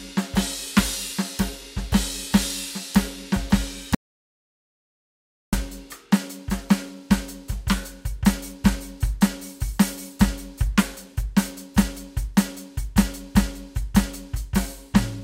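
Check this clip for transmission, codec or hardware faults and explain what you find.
One fault stands out in this music clip: an audio dropout to silence from 3.95 s to 5.53 s, about 1.58 s lost. The input was likely cut off, and the recorder kept writing silence. The music stops abruptly and resumes mid-phrase. Unlike a rest or a fade, the gap holds no reverb tail or room tone at all.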